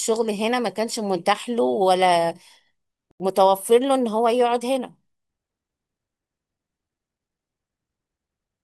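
At 3.11 s the speech drops to silence for about 86 ms and resumes at 3.20 s, a Bluetooth stall most likely caused by held-up packets draining the headphones' buffer. The waveform shows a flat gap, and the spectrogram a clean vertical band empty at all frequencies.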